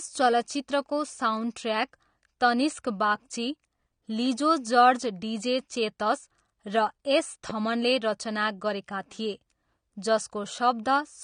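Throughout, the speech is dull and smeared, with nothing above 9.7 kHz and a fizzy warble on sibilants, likely from AAC compression at a low bitrate near 32 kbps, not simple low-pass filtering. From 7.50 to 7.52 s, a single loud pop rises a few dB above the speech while the speech carries on underneath, likely a brief voltage pulse rather than a dropout or click train.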